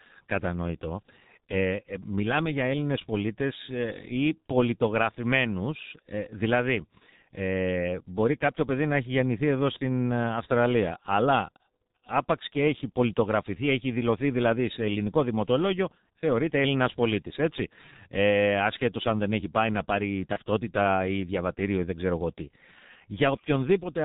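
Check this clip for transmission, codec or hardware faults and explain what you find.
Two faults are present: a low-rate speech codec across the whole clip, and one short concealed packet loss near the end.

G.723.1 codec, throughout: the speech is heavily degraded, which fits G.723.1 running at about 6.3 kbit/s. Its 30 ms frames and slow-updating voice model make the speech muffled and hoarse, with blurred consonants. On a spectrogram everything above 4 kHz is empty.

VoIP packet loss concealed by the speech codec, 20.33 to 20.38 s: this points to a single lost 30 ms frame. The decoder filled the gap by extending the previous pitch and filter at falling gain, so the sound briefly smears into a buzzy tone or coloured noise and stays weakened for a short time after. The spectrogram shows a frozen, fading smear, and the waveform a brief dip in the envelope.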